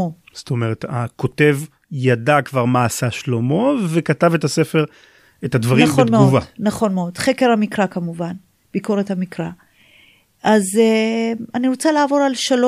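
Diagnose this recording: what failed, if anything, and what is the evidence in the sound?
No stage of the chain shows a failure in the sound of this speech recording, and the signal remains continuous and intact throughout.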